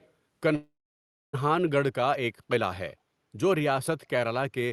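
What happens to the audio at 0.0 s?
From 0.0 to 0.11 s there is a faint echo leak: a trace of speech trailing about 0.35 s behind its source, roughly 35 dB below the main voice. This is likely an echo canceller at a loudspeaker end letting some of its microphone pickup return down the line. On a waveform it barely registers. A spectrogram shows a dim, smeared copy of the speech energy, cut off like the rest of the audio near 12 kHz by the call codec.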